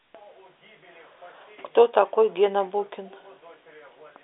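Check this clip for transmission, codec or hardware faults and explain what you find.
No transmission, codec or hardware faults are present.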